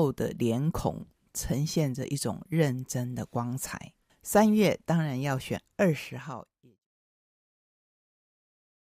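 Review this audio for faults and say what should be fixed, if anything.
Nothing here needs fixing: the speech signal holds steady, and the level eases down in a smooth, deliberate fade-out from around five and a half seconds to 6.88 s, with no click or hard edge where it ends.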